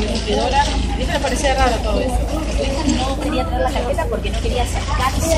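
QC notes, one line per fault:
Throughout: MP3 compression. Plainly audible watery, swirling texture with dulled treble, metallic chirps on bright sounds and smeared attacks. This is likely an MP3 encoder short of bits, consistent with about 64 kbps, cutting high frequencies and switching weak spectral lines on and off between frames.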